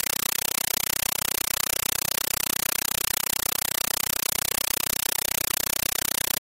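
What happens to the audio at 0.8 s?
At 0.8 s, as through the whole clip, the sound is replaced by a compressed stream played as audio. An AC-3 bitstream, consistent with 384 kbps, is being treated as ordinary PCM samples rather than decoded, so each coded frame comes out as a burst of noise about 8 ms long followed by silent padding, repeating 31.25 times a second. The result is very loud, harsh chattering static with no trace of the intended sound.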